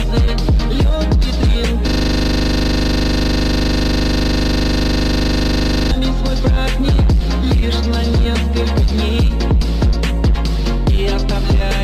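At 1.88 s a system hang loop begins and lasts until 5.91 s. The system froze while hardware kept replaying a 40 ms buffer, repeating it at 25 Hz.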